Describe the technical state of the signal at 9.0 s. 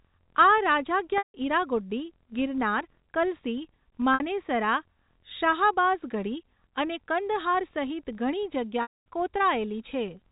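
At 9.0 s the signal is inside a packet loss with pitch repetition that runs from 8.82 to 9.06 s, a 240 ms gap. The receiver repeated the last pitch period and faded it out, so a brief held buzz has already decayed to silence by this point. The sound comes back with a short cross-fade at 9.06 s.

Underneath, a filter restarted on every block resets its state each 1024 samples. This leaves a faint 43.1 Hz tick-buzz that rises and falls with the signal's level.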